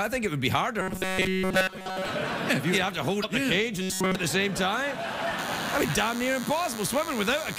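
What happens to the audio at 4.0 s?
From 3.82 to 4.16 s the sound turns into a rigid, metallic buzz at 188 Hz that only roughly follows the original. This is robotic sound from repeated short buffers, likely caused by the last 5.3 ms of audio being repeated throughout while new audio is skipped.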